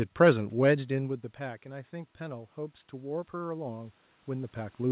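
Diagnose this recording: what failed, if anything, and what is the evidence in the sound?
Automatic gain rising from 0.94 s to the end at 4.91 s, in the call processing stage. After the input level fell by about 16 dB, the gain control slowly lifted its gain, so voice and room noise swell together over several seconds rather than jumping at once.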